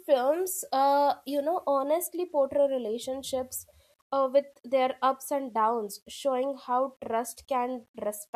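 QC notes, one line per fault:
Throughout, low bit depth without dither: quiet stretches of the speech turn grainy and gritty, with the roughness tracking the signal, and the softest tails sputter toward silence. The likely cause is rounding to about 9 bits, leaving signal-following error roughly 45 dB down.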